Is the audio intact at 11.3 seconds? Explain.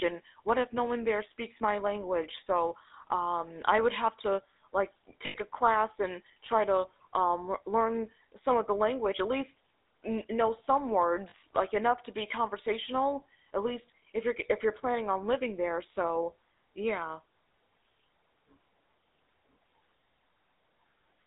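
No. Right after "know some" there's a short dropout from 11.3 to 11.34 s, about 40 ms, which fits two lost 20 ms frames in the GSM stream. With lost GSM frames, the decoder covers the gap by reusing the settings of the last good frame. So instead of a clean gap you hear a quick rough, metallic ring smeared over the sound before it picks up again at "like enough to be".

That moment also sits inside the GSM full-rate codec coloring that runs through the whole clip. The codec rebuilds speech from a vocal-tract model driven by regularly spaced pulses. That gives the plainly audible buzzy, gravelly roughness, which fits the 13 kbps full-rate codec. The band is squeezed to roughly 250 Hz to 3.7 kHz, so the sound is thin and lacks low end and top sparkle.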